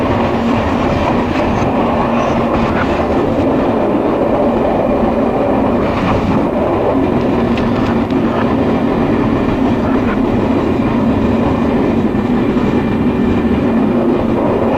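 The audio carries a train of clicks from 7.24 to 8.33 s: about ten similar pops at roughly 7.4 per second, unevenly spaced, peaking around 5 dB above the signal. They are likely from electrical interference or a faulty connection or power supply, showing as thin vertical broadband lines on a spectrogram and narrow spikes in the waveform.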